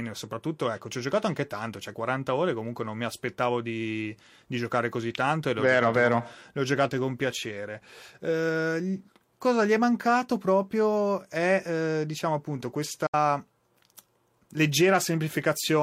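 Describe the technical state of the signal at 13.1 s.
A digital broadcast dropout runs from 13.06 to 13.14 s, just after "è eh diciamo appunto": the receiver mutes bad frames with an 8 ms fade into true silence, not concealment smear.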